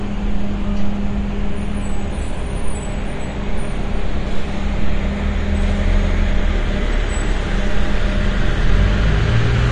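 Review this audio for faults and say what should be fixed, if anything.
Throughout, nothing survives above 9.7 kHz and the remaining highs warble and smear, the likely mark of AAC compression: coarse quantisation at a starved bitrate, consistent with about 32 kbps, drops whole spectral bands. A plain low-pass filter would sound dull but clean, whereas this shimmers. Encode at a higher bitrate or deliver from an uncompressed master.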